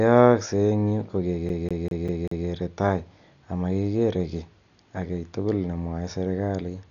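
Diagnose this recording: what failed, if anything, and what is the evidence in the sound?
At the codec stage, the speech is dull throughout, with nothing above 7 kHz and a rough, fluttering noise around tonal parts. This likely comes from heavy Dolby Digital compression, at a bitrate the damage suggests is near 48 kbps. The encoder narrowed the band and left many frequency lines without mantissa bits, so the decoder filled them with dither noise. A spectrogram would show a hard ceiling at 7 kHz and speckled noise where harmonics should be.

At playback, a CD stuck on one turn makes the same 196 ms of audio repeat five times from 1.49 to 2.47 s. Each jump has a brief mute, giving a fast, even stutter. A scratch sent the laser back one track on every rotation. The waveform would show identical segments repeating, separated by short gaps.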